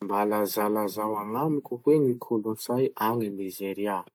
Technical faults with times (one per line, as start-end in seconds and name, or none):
none